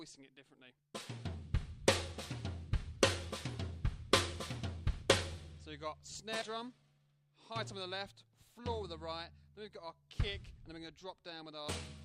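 Compressed frames skipped at 6.41 to 6.45 s: a short stretch of the encoded audio never reaches the output, so the sound jumps ahead by roughly 70 ms, which fits a few missing or rejected 20 ms frames.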